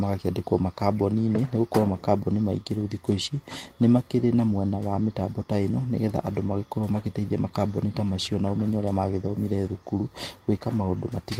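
No technical faults can be heard anywhere in the recording. There is nothing in the audio to place on a timeline or describe.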